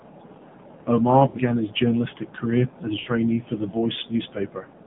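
From start to finish the speech passes through the AMR narrowband mobile codec. The band runs only from about 150 Hz to 3.6 kHz. Everything above is gone, so the sound is thin and boxy. The codec rebuilds speech from a vocal tract model fed by a few pulses. Here the damage is plainly audible. The speech has a buzzy, synthetic edge, which fits a low mode around 7.4 kbps.

At 1.28 to 1.37 s there are lost AMR speech frames. About 60 ms of audio never arrived intact. The decoder filled the gap by repeating the last good pitch and vocal tract settings at falling gain. The result is a short smeared warble where the speech briefly stretches and dips. The same fault returns at 3.0 to 3.09 s, again about 60 ms long, with the same drawn-out, wobbly dip.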